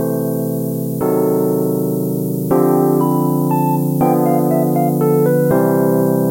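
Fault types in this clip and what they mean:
Low bit depth with noise shaping: the audio runs on about 6 bits, and the rounding error gets pushed upward in frequency, so you hear a steady, thin hiss climbing toward the top end, sitting only about 15 dB under the signal the whole way through.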